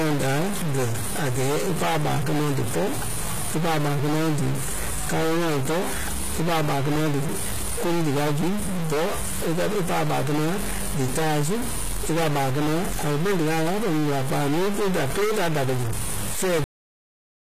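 Speech runs through the whole recording with a distortion riding on every sound and a gritty noise that fills the pauses instead of silence. That pattern of waveform-dependent error is most likely a stuck bit, one data bit held at a fixed value so that the samples it touches are pushed off by that bit's weight. The treble is also plainly damaged, with sibilants sounding gritty and metallic and nothing at all above 14.9 kHz. That points to HE-AAC compression, with the upper band rebuilt by spectral band replication from copied lower bands, at a low rate in the region of 20 kbps. At 16.64 s, right after "da kɛ́ zu fɛ̂ɛ", the audio is a cut-off end: it stops mid-sound and drops straight to digital silence with no decay, because the final buffers were never written out.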